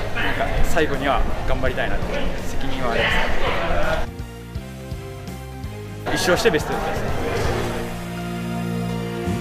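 No technical faults can be heard anywhere in this audio.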